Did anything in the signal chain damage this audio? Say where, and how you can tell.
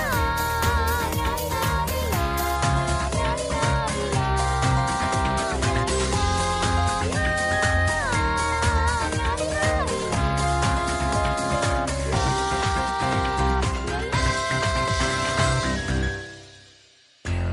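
Yes. At 2.55 s the stream switches to a lower bitrate and stays there to the end. The treble suddenly stops at 11.2 kHz, with no gap, and codec smearing rises. That fits the network slowing and the player switching from roughly 128 to 48 kbit/s MP3.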